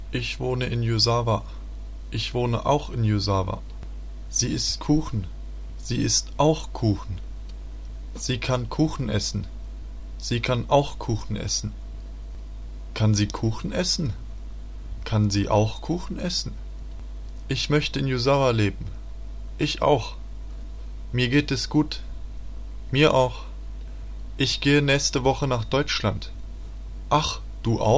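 Nothing in the audio stands out as a technical problem, so there's nothing to flag here.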